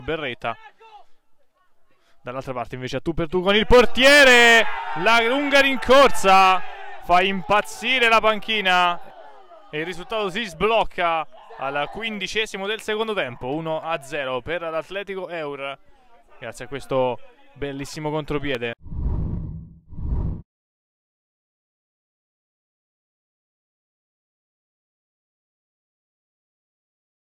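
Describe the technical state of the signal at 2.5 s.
No fault can be heard at 2.5 s; the audio is intact at that point.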